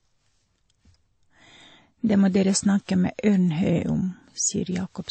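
The speech was likely passed through two lossy codecs in turn, transcoding between lossy codecs, with a low-rate MP3-style encode followed by a WMA-style one. Across the whole clip, nothing is heard above 8.4 kHz, the lower band limit carried through the chain. The second encoder spent its bits re-coding the first one's artefacts and added its own, so both sets of artefacts sit together in a dull sound, consistent with low bitrates at each stage.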